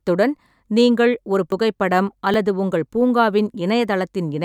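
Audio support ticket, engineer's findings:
Skips forward in the speech at 1.52 s and 2.34 s, the second losing about twice as much (roughly 20 ms, then 40 ms). Likely a dropped buffer (overrun): capture buffers overwritten before being read, edges butted together. No silent gap, unlike a dropout.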